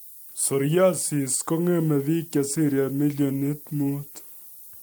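From the first moment to the end, a steady, thin hiss sits under the speech, only roughly 20 dB below it and climbing sharply toward the top of the band. This is low bit depth with noise shaping. The waveform is stored with very few levels, which fits about 7 bits. The rounding error from that coarse grid has been pushed upward in frequency, so it lands as bright treble hiss rather than broadband grit.

At 2.37 s, right after "kong'eme bik", the speech turns rough and watery and loses its top end, staying degraded until 4.33 s. This is a call bitrate drop. The link's bandwidth estimate fell, and the encoder was told to spend far fewer bits, which fits a fall from 64 to about 28 kbps. At that rate the codec quantises coarsely and trims high frequencies. The sound holds at its worst for about 1.9 s before recovering.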